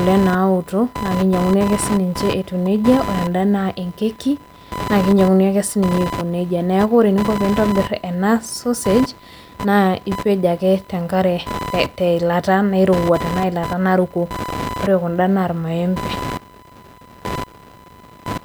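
Computer activity noise runs through the whole speech clip: a buzzy, chirping whine pulsing at around 1 kHz and sitting roughly 10 dB below the voice. Shifting processor or graphics load disturbs the ground the audio circuit shares, so the noise follows the machine, not the talker.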